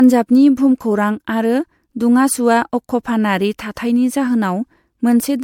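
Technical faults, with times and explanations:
Throughout, generation loss: the speech has a swirly, hollow, smeared quality beyond what a single lossy pass would give, and consonant attacks lose their edge. The sound points to an MP3 chain around 96 kbit/s, likely re-encoded about four times, each pass quantising on a shifted frame grid so noise and gaps accumulate. A spectrogram shows blotchy, flickering holes across the upper bands, with nothing above 20.1 kHz; the waveform shows softened, pre-echoed onsets.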